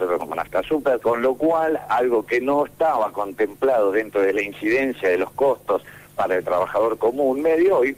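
No technical faults occur anywhere in the audio, so there is nothing to place in time order.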